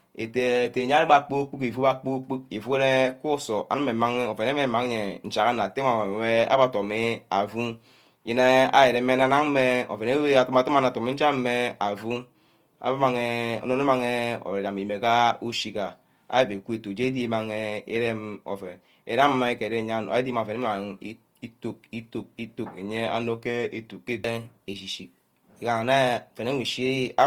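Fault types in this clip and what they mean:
Opus compression: likely Opus encoding in its music mode at a low rate that fits about 24 kbps, leaving the speech plainly grainy, rough and noisy while still full bandwidth.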